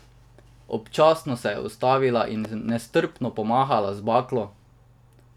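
From 2.45 to 2.71 s, just before "nestrpno pomahala", a loud pop sounds twice over the speech. It likely comes from a sudden voltage step.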